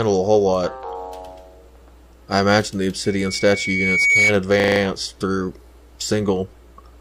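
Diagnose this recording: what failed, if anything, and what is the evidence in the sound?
Loudspeaker feedback squeal from 3.05 to 4.38 s: a 2.2 kHz tone swells over about a second to roughly 5 dB above the sound. The mic is hearing its own speaker.

System hang loop at 4.6 to 4.8 s, a driver or buffer stall: one 40 ms chunk repeats five times as a 25 Hz stutter while the ring buffer keeps cycling.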